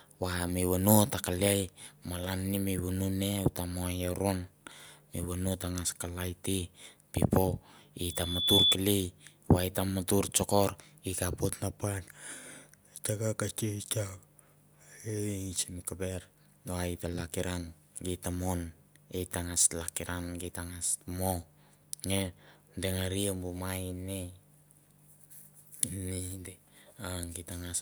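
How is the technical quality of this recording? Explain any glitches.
The recording has one clear glitch: a burst of loudspeaker feedback squeal. From 8.02 to 8.78 s a pure tone at 3.4 kHz swells over roughly half a second until it stands around 10 dB above the speech. The microphone was picking up a loudspeaker it was feeding, and at that frequency the loop gain passed one, so the tone kept building on itself. On a spectrogram it is a bright horizontal line at 3.4 kHz that thickens as it grows, and on the waveform the envelope rises steadily into a dense, even band.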